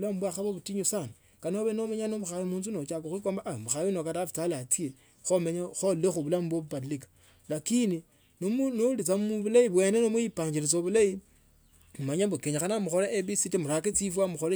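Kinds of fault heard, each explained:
No kinds of fault are heard in this speech clip.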